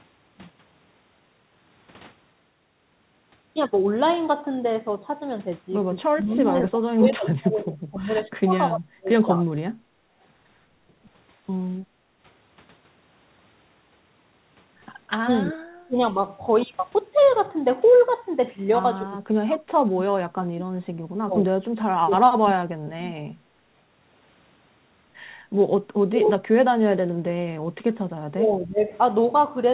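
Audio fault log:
6.07–9.54 s, 15.25–15.97 s, 19.05–23.3 s, 26.03–26.97 s, 28.32–28.91 s: speech suppressed in double talk. The voice sinks by about 20 to 40 dB in places, likely an echo canceller turning down both sides while they overlap.
6.61–7.75 s: echo leak. A faint copy of the voice trails 294 ms behind, about 25 dB below the speech, likely loudspeaker pickup the canceller did not remove.
9.82–10.17 s and 11.81–12.26 s: background gated by the echo canceller. Room sound dips by about 9 and 11 dB for up to about half a second while the canceller holds the microphone down, then recovers.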